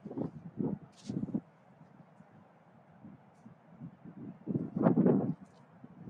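From start to finish, a noise suppressor applied to music or sounds is at work. Built for speech, it treats held tones, ambience and reverb tails as noise. Attacks pass, then sustained sound sinks by around 10 dB. The result pumps and thins.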